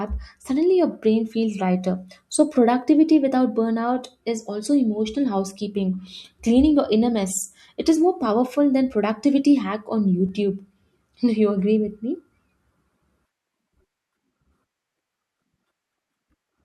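At 10.26 s the speech is broken by a corrupt FLAC frame: a brief error, peaking at about -28 dBFS, that lasts until 10.29 s. Damaged bits sent the decoder's prediction off course. The clean recovery afterwards points to a single bad frame.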